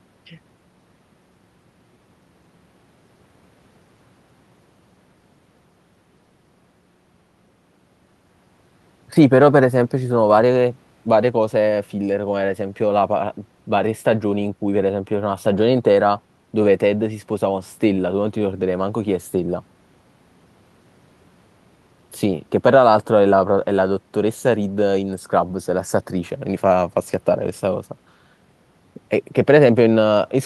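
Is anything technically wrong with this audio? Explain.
No, nothing technically wrong stood out on listening to this recording.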